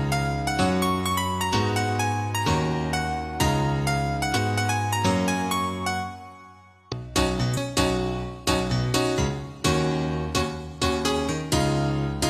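At 4.32, 6.88 and 7.53 s, compressed frames are skipped. Roughly 0.2, 0.7 and 0.1 s of audio vanish in 46.4 ms steps. Each jump leaves a join, seen as an abrupt vertical seam.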